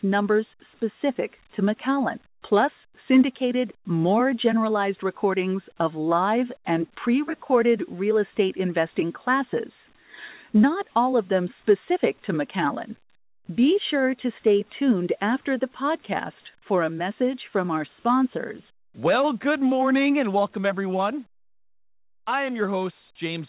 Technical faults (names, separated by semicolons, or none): none